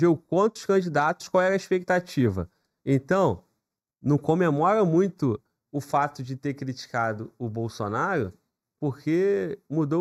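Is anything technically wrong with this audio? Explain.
Yes. Throughout the clip there is channel delay causing comb filtering. One channel arrives a fraction of a millisecond late, and summing the two to mono cancels the shared content at evenly spaced frequencies. The first notch sits around 3 kHz, so the sound is hollow and phasey.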